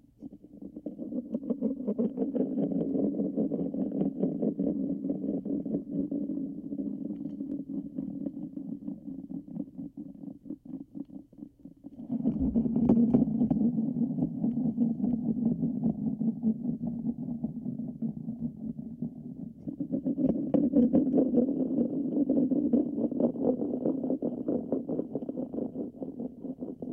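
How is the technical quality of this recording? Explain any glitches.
Nothing here calls for a fix, since the recording comes across as steady and even, with no glitches to point to anywhere along the way.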